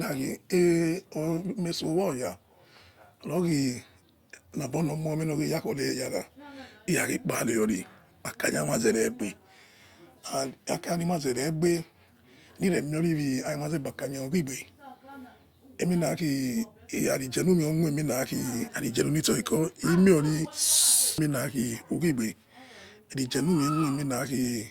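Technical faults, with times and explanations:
Nothing in the speech stood out as a technical problem on listening.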